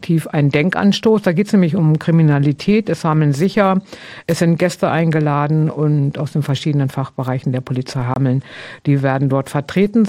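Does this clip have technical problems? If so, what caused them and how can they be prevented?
Yes. Around 8.14 to 8.16 s there is a block of digital silence. The output buffer was most likely not filled in time, so about 23 ms of samples came out as zeros, which fits a single 1024-sample buffer going missing. The audio drops straight to nothing and returns with no fade, leaving a brief hole. To prevent it, use a larger buffer and give the audio processing enough time and priority that each buffer is filled before it is due.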